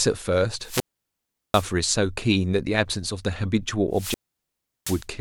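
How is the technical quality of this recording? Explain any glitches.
The recording is marred by two wireless microphone squelch dropouts, at 0.60 to 1.73 s and 3.91 to 5.06 s. Each time the FM radio link weakens, hiss briefly swells, then the receiver's squelch mutes the output for about 0.74 s and 0.73 s respectively before the speech returns. On a spectrogram this shows as a broadband noise smear, then a near-empty column; the waveform flattens to almost nothing during each mute.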